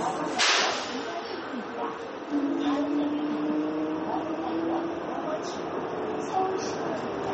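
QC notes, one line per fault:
throughout, MP3 compression: hard cutoff with nothing above 8.2 kHz, plus a plainly audible watery swirl and smeared attacks, likely an MP3 encoder short of bits, which fits a 32 kbps stream. The spectrogram shows a flat ceiling at 8.2 kHz and flickering gaps where weak bands drop out.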